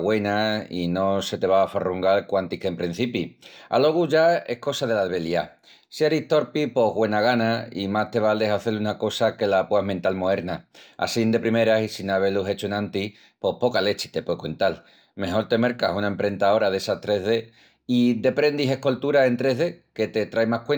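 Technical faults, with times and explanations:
Throughout: imaging from linear upsampling. Dulled highs and a faint metallic shimmer on sibilants, as straight-line interpolation leaves mirror images between 11 and 22 kHz, about 35 dB down.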